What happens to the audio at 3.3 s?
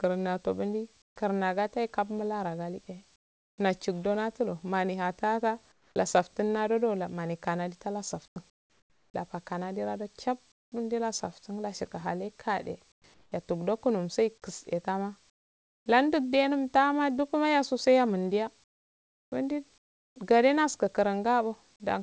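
From 3.16 to 3.58 s, comfort noise replaces the background: a steady, featureless hiss about 26 dB quieter, likely synthesised during discontinuous transmission.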